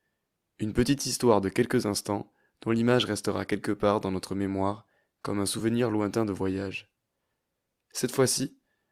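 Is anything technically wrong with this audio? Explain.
Yes, there is one fault in this speech clip. Lost LE Audio frames occur at 5.59 s, between "notre mémoire comme un" and "lointain de voyage". About 10 ms of the Bluetooth LE Audio stream went missing, which fits a single lost LC3 frame. The decoder covered the gap by repeating the previous spectrum with randomised signs. Because the dropout is so short, no fade-out was needed, and it comes through as a brief noisy smear in the middle of the voice. The light lossy compression present throughout is faint at most.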